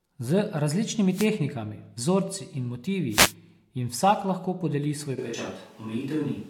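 At 1.11 s and again at 3.10 s, after "vzorci in", a wireless microphone noise hit sounds. The FM signal fades, and receiver static swishes in briefly.

From 5.20 s, after "vsak lahko podeli svoj", the sound turns roomy, hollow and thin to the end. The level barely changes, and room noise sits far below the speech. This is likely a switch to a distant microphone.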